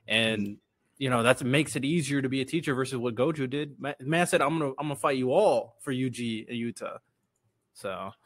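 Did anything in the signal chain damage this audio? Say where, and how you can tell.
No, nothing damaged it.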